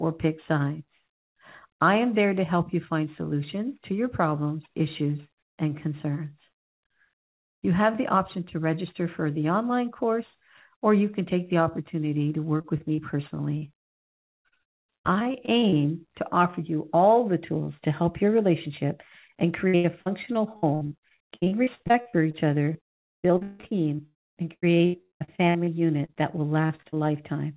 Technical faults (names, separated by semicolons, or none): repeated packet loss (robotic sound); short concealed packet loss